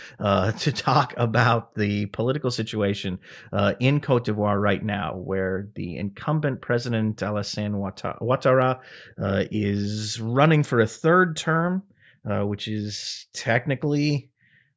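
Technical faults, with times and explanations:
No technical faults are audible anywhere in the recording.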